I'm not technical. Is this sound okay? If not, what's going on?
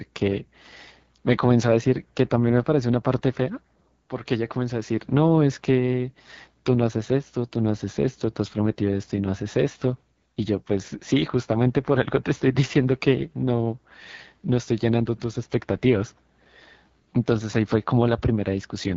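No. The speech passed through an AMR wideband (HD Voice) codec, the phone-call compression, at one of its lowest data settings. Too little detail survives, so the voice sounds rough and raspy from start to finish, with a hissy, artificial top end.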